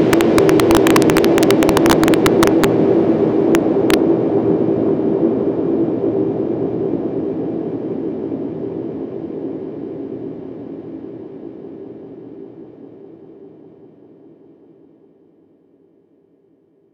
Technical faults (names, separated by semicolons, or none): integer overflow